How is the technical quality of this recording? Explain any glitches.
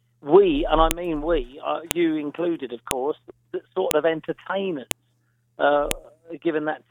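The recording has a recurring glitch: a file header played as audio. Joined one-second pieces kept their WAV headers, so those bytes play as a sharp snap at 0.91, 1.91, 2.91, 3.91, 4.91 and 5.91 s.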